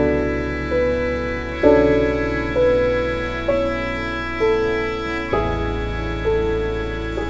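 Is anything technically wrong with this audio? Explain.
No, nothing in this music clip points to a technical problem. It has evidently passed through a wideband call connection, so nothing is heard above 8 kHz, which fits a G.722 codec running at 64 kbps.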